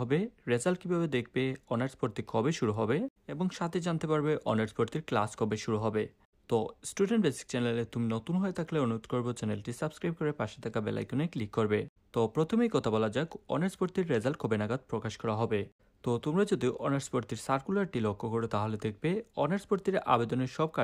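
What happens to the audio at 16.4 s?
Nothing goes wrong at 16.4 s; the audio plays through that moment intact, with no dropout, click, distortion or other fault.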